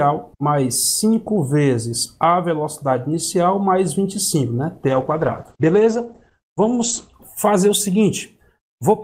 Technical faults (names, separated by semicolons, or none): call bitrate drop